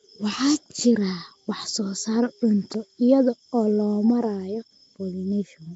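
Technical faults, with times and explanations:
Throughout, Nellymoser compression. Speech sounds rough, hissy and underwater, with nothing above 7.7 kHz. Likely the Nellymoser Asao codec filling bit-starved weak bands with noise.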